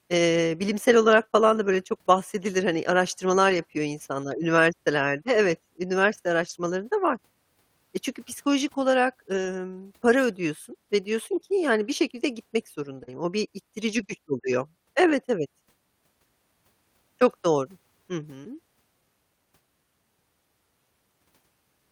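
At 3.49 to 3.59 s, between "araştırmalar" and "insanlar üniversitelerde", there's the first lost packet rebuilt from error correction. The audio doesn't drop out. It just turns grainy and a bit hissy for about 60 ms, which fits roughly three packets. Each missing one was rebuilt from the lower-quality backup copy carried in the next packet. The same roughening comes back at 6.41 to 6.51 s, at 9.33 to 9.47 s after "olarak" (about 80 ms this time), at 13.07 to 13.17 s, and at 13.87 to 14.05 s, which is the longest at about 100 ms.

Right after "gitmek", at 13.03 to 13.09 s, there's a short concealed packet loss. About 40 ms of audio never arrived in time, and the decoder stretched the previous sound across the hole before fading back into the real signal. It comes across as a quick smear or wobble, and it runs straight into the rebuilt stretch starting at 13.07 s.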